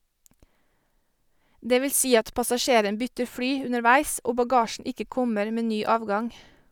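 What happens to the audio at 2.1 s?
Nothing goes wrong at 2.1 s: the audio runs straight through that moment without any dropout, click, distortion or other audible fault.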